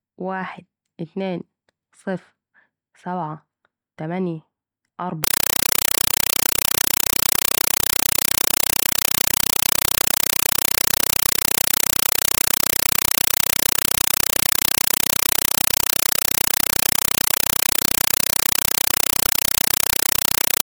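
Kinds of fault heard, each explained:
Compressed stream played as audio: from about 5.24 s to the end, the speech gives way to a harsh, very loud chattering static. That's a Dolby Digital (AC-3) bitstream going out over the digital link as raw samples instead of being decoded. Each frame lands as a short burst of noise, about 5.33 ms long, then silence from the zero padding, repeating 31.25 times a second. That pattern fits a 256 kbps stream.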